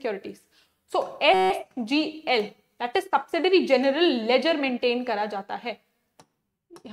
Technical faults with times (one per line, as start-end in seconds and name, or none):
1.34-1.50 system hang loop